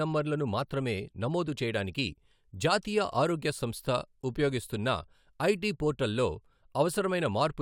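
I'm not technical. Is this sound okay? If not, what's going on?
Yes, this sound is okay, and there's nothing going on with it that needs fixing.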